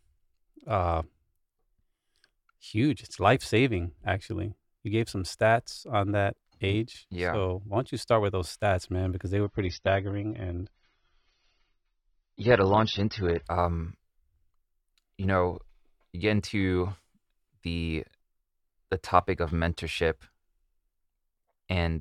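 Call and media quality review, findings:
Speech turns dull and swirly 9.44–13.44 s, nothing above 6.3 kHz, abrupt switch, no gap. Adaptive stream at a lower bitrate; fits a drop from 96 to 24 kbit/s.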